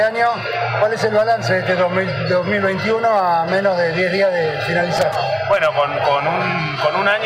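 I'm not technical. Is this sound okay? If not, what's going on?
No. There's loose connector crackle from about 4.97 to 5.16 seconds, a burst of crackling lasting roughly a fifth of a second. A worn or dirty plug or socket keeps connecting and disconnecting as it moves, chopping the sound up.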